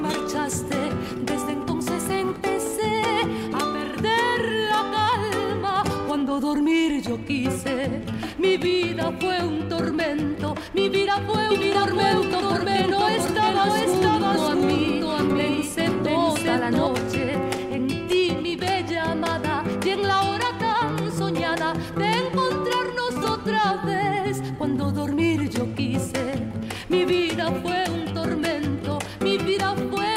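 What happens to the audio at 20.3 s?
Nothing goes wrong at 20.3 s; the audio runs through that moment intact, with no dropout, click or other fault.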